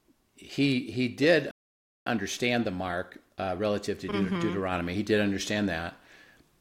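At 1.51 s the speech stops dead for about 0.55 s, until 2.06 s. This playback stall likely came from the player running short of data.

From 2.06 s to 5.06 s comes time-compressed catch-up. The speech runs about 1.1 times fast at normal pitch.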